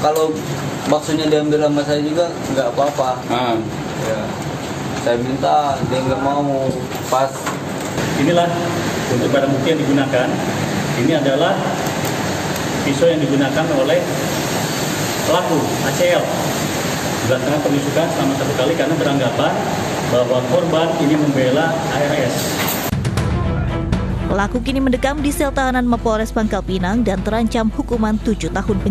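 Mains hum enters the audio at 23.31 s and continues to the end: a steady 50 Hz tone sitting only around 10 dB below the programme, a low drone under everything that follows. The fixed frequency ties it to the power line, with 50 Hz pointing to a 50 Hz supply. The energy is being coupled into the signal path, through a ground loop between connected equipment or through magnetic pickup from a nearby transformer.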